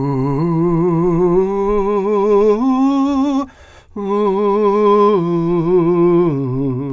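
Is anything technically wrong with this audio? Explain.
No, nothing technically wrong turns up here; the music just sounds the way it should all the way through.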